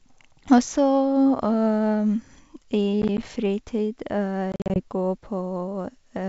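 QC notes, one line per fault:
3.02–3.25 s, processor overload crackle: a short burst of gritty crackle rides on the speech. The processor repeatedly failed to deliver audio buffers on time, and each missed deadline was filled with silence, leaving a hard-edged gap. The spacing fits buffers of around 10 ms, with something like seven dropped in quick succession. These tiny holes run together into crackle that stops once the load passes.
4.52–4.80 s, packet loss on an ADPCM call: about 140 ms of audio drops out, scattered across roughly 240 ms as hard-edged silent holes, the longest about 40 ms. The pattern points to around seven lost packets. Because ADPCM codes each sample relative to a running prediction and an adaptive step size, every hole leaves the decoder's state out of step with the sender's. The speech resumes disturbed until the predictor and step size realign, on top of G.722 wideband coding that itself adds little or no audible damage.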